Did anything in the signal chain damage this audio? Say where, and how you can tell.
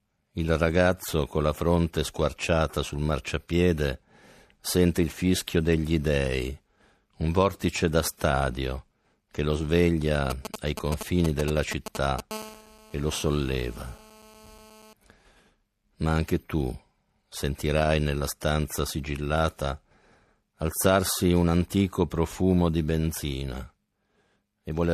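Yes, both problems got in at the analogue wiring stage. From 10.30 to 12.21 s there are GSM signalling bursts: a galloping dit-dit-dit of short buzzes at about 217 Hz, nearly as loud as the speech. A 2G handset close by is sending short groups of radio bursts while it sets something up, and some unshielded point in the analogue path rectifies that RF into audible clicks and buzz fragments.

Right after that, from 12.31 to 14.93 s, a nearby handset is in a call, and you get steady GSM phone buzz. It's a hard, raspy tone at 217 Hz with lots of harmonics, about 20 dB below the speech. It doesn't follow the speech at all. It's the phone's transmit bursts repeating 217 times a second, demodulated by the same weak spot in the analogue wiring and added straight into the signal.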